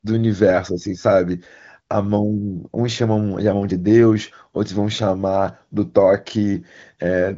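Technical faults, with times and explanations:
No faults: the speech carries the wideband character of AMR-WB HD Voice, with nothing above about 7.6 kHz, and coding damage is faint at most, which points to one of the codec's top rates.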